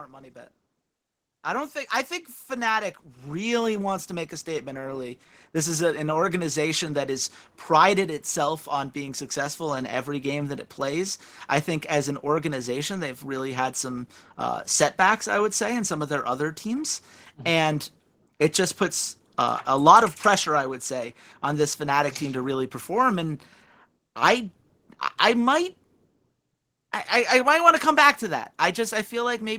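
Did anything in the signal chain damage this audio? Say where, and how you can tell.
Yes. From 0.07 s to 14.11 s the speech and the background noise swell together, climbing about 14 dB before levelling off just before "uh setbacks I would". This is automatic gain rising in the call processing: the AGC judged the input too quiet and slowly raised its gain.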